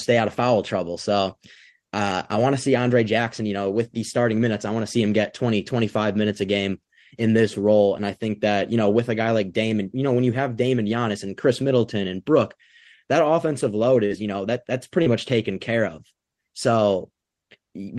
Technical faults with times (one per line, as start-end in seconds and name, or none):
14.05-14.12 burst of packet loss
15.02-15.08 short concealed packet loss